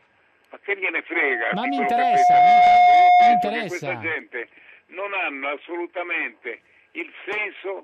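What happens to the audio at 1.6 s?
At 1.6 s the audio is in a loudspeaker feedback squeal running from 1.13 to 3.74 s. A microphone is picking up its own loudspeaker, and at 717 Hz the loop gain exceeds one, so that tone swells over about a second and a half to roughly 15 dB above the sound.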